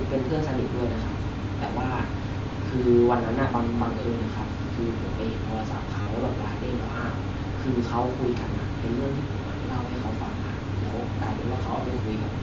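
Concealed Bluetooth headset packet loss hits this speech clip from 6.02 to 6.07 s: about 45 ms of audio, which fits roughly six lost headset packets, is filled by repeating the best-matching recent waveform, giving a brief buzzy, steady tone and a slight warble as the real speech resumes, heard over the 8 kHz-limited mSBC wideband sound.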